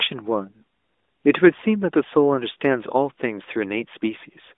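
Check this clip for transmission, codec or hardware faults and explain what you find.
No transmission, codec or hardware faults turn up in this speech clip.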